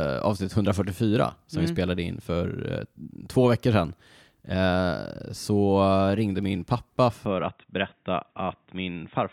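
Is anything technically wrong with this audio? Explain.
Yes. From 7.25 s to the end, the input likely switched to a poorer device: its narrower band cuts everything above 3.8 kHz, so the speech turns dull and boxy, about 5 dB quieter, with a faint new noise floor.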